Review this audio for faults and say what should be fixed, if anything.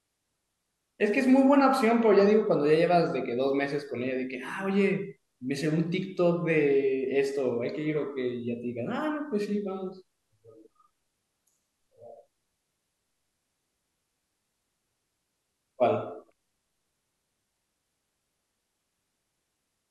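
Nothing in this speech recording needs fixing. No faults can be heard at any point, so no corrective or preventive step is called for.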